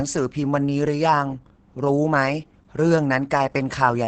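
Speech compressed with Opus voice compression throughout its length. The voice sounds muffled, hoarse and faintly robotic because the SILK linear-prediction coder is coding the excitation very coarsely, which fits a bitrate near 10 kb/s in wideband mode. On a spectrogram, energy stops sharply at about 8.6 kHz with nothing above it, and the harmonics below look smeared and blocky. The damage is heavy.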